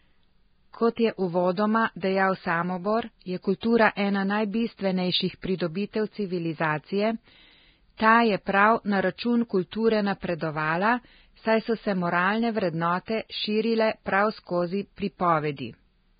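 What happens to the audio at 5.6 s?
Just after "ena najbistvenejših", from 5.58 to 5.60 s, there is pre-echo. Coding noise smears about 24 ms ahead of the attack, so a short hiss leads it. Unlike reverb, the smear comes before the sound rather than after it. Throughout, the sound is hissy and grainy with nothing above 4.9 kHz, likely from heavy Vorbis compression at a very low bitrate. That is a steady band-limit rather than a single event.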